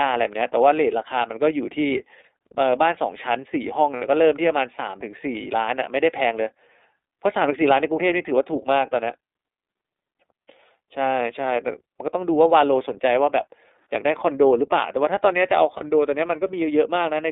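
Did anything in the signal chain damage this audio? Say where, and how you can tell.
Yes, and it's the codec stage. The whole clip sits in a line band of roughly 250 Hz to 3.7 kHz, with a rough, slightly synthetic edge on the speech. That's the iLBC codec, and the plainly audible coding damage fits its 13.33 kbps, 30 ms frame mode.

Then the network stage drops some packets, giving lost iLBC frames at 3.95 to 4.03 s and 15.77 to 15.82 s. Each gap becomes a brief held, buzzy vowel as the decoder repeats the last pitch cycle with noise. The 60 ms gap points to two lost frames and the 30 ms one to a single frame. Since frames stand alone, the voice snaps back right away.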